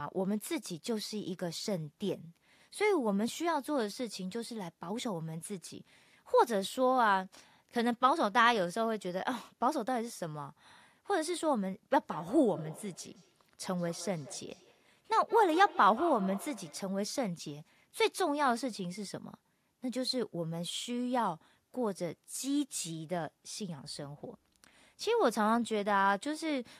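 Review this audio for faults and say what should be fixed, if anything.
Two devices in the same room were joined to this call, so one loudspeaker replayed the other's microphone feed and that microphone picked it up again, outside the reach of its own echo canceller. The result is feedback echo between two devices from 12.09 to 16.94 s: the speech returns at a steady interval of about a fifth of a second, thinner and ringing, peaking at about 13 dB below the speech. To prevent it, mute the microphone and speaker on all but one device in the room.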